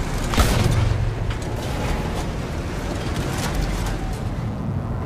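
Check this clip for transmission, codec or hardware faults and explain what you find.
One hardware fault runs through the whole clip: mains buzz. It sits under the sound from start to finish. It is locked to 60 Hz mains. Switching spikes from a dimmer, a rectifier or a missing shield get into the signal path twice every mains cycle. Their sharp edges spread energy across many harmonics of 60 Hz, reaching up to several kilohertz. The result is a steady, raspy buzz, about 30 dB below the wanted signal.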